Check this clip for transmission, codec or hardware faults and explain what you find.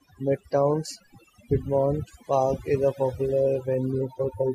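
One fault turns up, and it's processing rather than transmission or hardware: overdone noise removal across the whole clip. The denoiser gates bands near its noise estimate, leaving near-silent gaps with twinkly specks, and quiet parts of the voice go with them.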